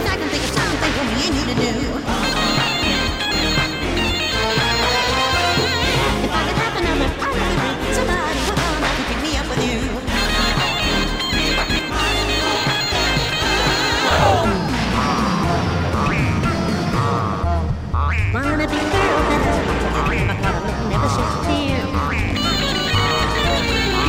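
Nothing is technically wrong with the clip; no faults can be heard anywhere in the audio.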